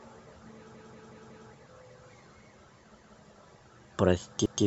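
Speech clip with repeated buffer stutters: a 186 ms block replays four extra times at 0.74–1.49 s, once at 2.97–3.16 s and once at 4.46–4.64 s, consistent with an 8192-sample playback buffer starving.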